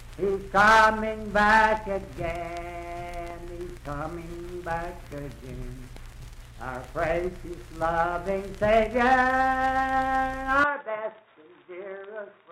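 An input switched to a poorer device at 10.64 s, lasting to the end of the audio at 12.51 s. With no gap at the changeover, the sound abruptly turns dull and boxy, with nothing above 3.8 kHz, drops roughly 5 dB in level, and gains a faint new background noise around 50 dB below the signal. This is likely the system moving to a different, narrower-band microphone or a headset call profile partway through the recording.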